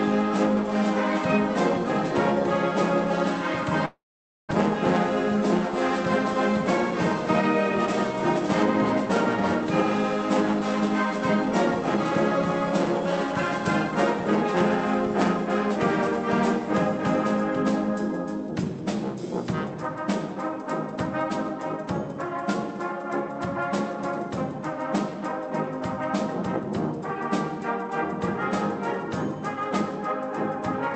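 A long network dropout at 3.85 to 4.53 s, likely from lost packets, leaves the last sound smeared into a fading buzz and then silence, with about 0.4 s of audio never returning. A jitter buffer speed-up from 19.97 to 23.30 s trims pitch-period slices, around 40 ms in total, so the audio runs at 101% speed with unchanged pitch. The audio also carries call-codec coding noise with nothing above 8 kHz, consistent with an Opus stream at roughly 32 kbps.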